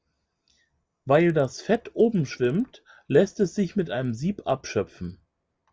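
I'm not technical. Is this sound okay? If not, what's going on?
No. The resampler restarted on every block: the step that converts the recording from 24 kHz to 16 kHz handled each 50 ms chunk separately, leaving a small error at every chunk edge. Throughout the speech, this gives a buzz of 20 ticks per second.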